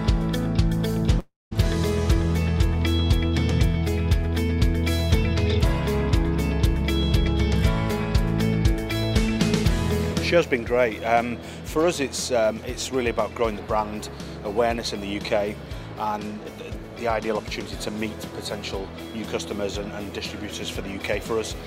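A long network dropout runs from 1.19 to 1.53 s. The last sound is stretched into a fading buzz that sinks to near silence for about 0.19 s. The audio resumes roughly 0.32 s further on, most likely because packets stopped arriving and were never recovered.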